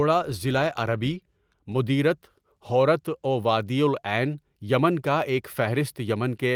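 No technical faults can be heard anywhere in the recording.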